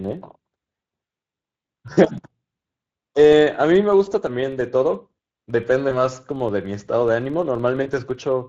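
A hoarse, grainy roughness runs through the whole speech clip, with a noisy edge on voiced sounds and a thin, fizzy top end. That is the Speex codec, audibly damaged. Its CELP coder has too few bits to rebuild the excitation faithfully, so the voice takes on that rasp, and whatever sits above 8 kHz is a shaped noise fill rather than real detail. The roughness points to a setting of around 20 kbps.

Under that, and also continuous, is a low buzz at about 23.4 Hz that rises and falls with the loudness of the speech. This comes from a filter restarted on every block. It drops its memory at each block boundary and starts again from silence, so every block opens with a tiny transient. The repeat rate fits a 2048-sample block.

Four short dropouts then break into the speech: 1.93 to 1.99 s, 4.05 to 4.11 s, 5.89 to 6.02 s and 7.83 to 7.89 s. In each one the voice is stretched into a buzzy tone or coloured noise that fades, and sounds weak and distorted for a moment afterwards. 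This is VoIP packet loss concealed by the speech codec. The decoder fills each gap of about 20 to 40 ms by extending its last pitch and filter at falling gain. Because each frame builds on the previous one, the damage outlasts the gap. The 5.89 s event recovers most slowly, lasting about 0.13 s in all.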